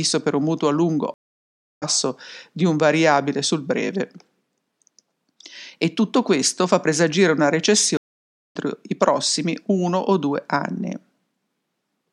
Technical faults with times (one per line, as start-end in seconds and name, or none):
1.14-1.83 stream reconnect
7.97-8.56 stream reconnect